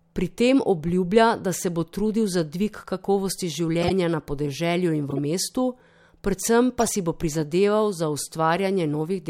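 At 0.88 s, just before "da se bo trudil", a corrupt frame decoded leaves a faint blip. Damaged bits misplace energy. Louder bursts follow at 3.80–3.91 s and 5.09–5.19 s, spanning several frames. At 6.78–6.90 s, compressed frames skipped cause a jump of roughly 30 ms.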